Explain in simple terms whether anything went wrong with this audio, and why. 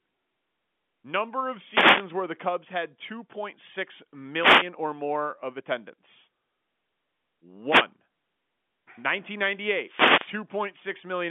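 The radio link from the wireless microphone briefly faded four times, each a wireless microphone noise hit. Reflected radio waves cancelled the signal, letting receiver hiss break through. You hear short swishes of static at 1.69–2.07, 4.36–4.70, 7.64–7.89 and 9.80–10.40 seconds.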